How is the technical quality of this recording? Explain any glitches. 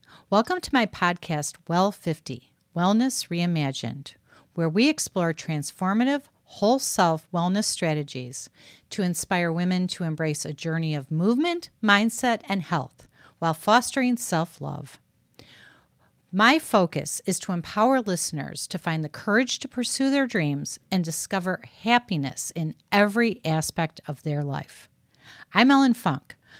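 No technical faults can be heard in this recording.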